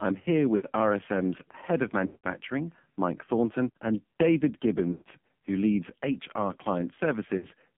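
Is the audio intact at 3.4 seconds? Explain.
No. At 3.4 seconds, as across the whole clip, the speech carries AMR narrowband mobile codec damage. The band is confined to roughly 150 Hz to 3.5 kHz. The codec rebuilds each 20 ms frame from a vocal-tract filter excited by a handful of pulses per 5 ms subframe. The heavy buzzy, synthetic coloration this produces fits a low-rate mode around 5.9 kbps, and the missing top end leaves consonants dull and lispy.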